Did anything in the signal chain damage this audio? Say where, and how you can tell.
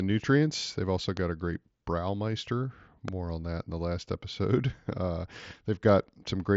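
Yes. A loud pop occurs at 1.17–1.19 s, just before "a great", and again at 3.08–3.10 s, before "on that in the", peaking about 15 and 10 dB above the speech. The speech continues underneath, band-limited near 7.7 kHz by the mSBC link. This points to analogue wiring, likely a contact or static transient.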